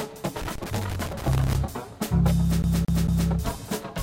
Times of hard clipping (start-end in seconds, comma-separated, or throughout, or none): none